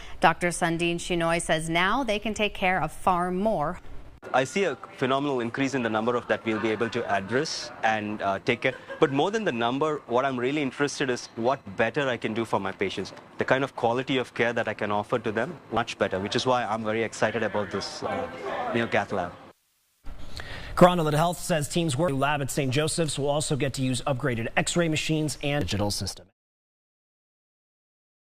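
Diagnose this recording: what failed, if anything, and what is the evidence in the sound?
The failure is at the codec or storage stage: damaged data in the compressed stream. Brief glitches land at 3.79, 6.30, 15.77, 22.08 and 25.61 s. Corrupted frames threw the decoder off sync until it found the next header. The smooth fade-out finishing at 26.33 s is an ordinary edit.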